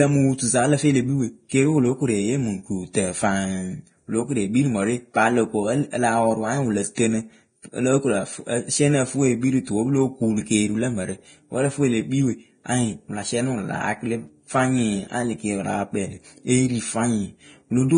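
From start to finish the speech carries the heavy damage typical of Vorbis compression, likely at a low bitrate in the region of 23 kbps. The treble is hissy and grainy, sibilants turn to coarse noise, and consonant attacks are smeared. The encoder has discarded fine high-frequency detail, so on a spectrogram the content stops at a hard ceiling near 9.7 kHz, with blotchy, noise-like patches in place of clean harmonic structure beneath it.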